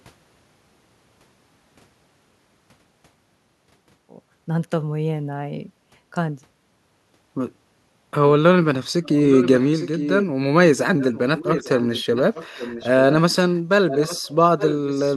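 Speech with an echo leak in its last six seconds: a delayed copy of the speech, trailing by 855 ms, surfaces at 9.03 to 10.26 s, 10.99 to 11.19 s, 11.37 to 12.9 s, 13.52 to 13.6 s, 13.9 to 14.29 s and 14.58 s to the end. It sits roughly 10 to 15 dB under the direct speech, dropping to a faint trace near 13.5 s. The likely cause is a far-end loudspeaker whose echo canceller let part of the microphone pickup back through.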